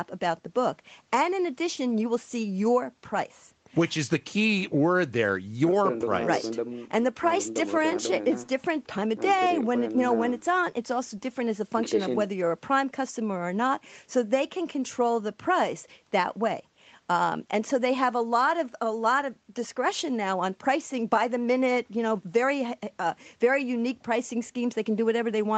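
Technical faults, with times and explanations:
No faults turn up in this speech, which has come through a call path whose content stops at about 8 kHz, just as you'd expect from an Opus-style call codec working at 20 kbps.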